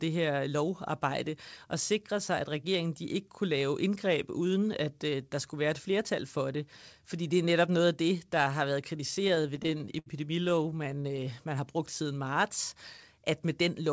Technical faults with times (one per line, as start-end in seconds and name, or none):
9.11-10.09 repeated stalls (stutter)
10.45-11.21 repeated stalls (stutter)
11.49-12.35 jitter buffer slow-down